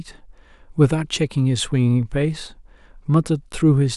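No technical fault is audible anywhere in this short speech recording.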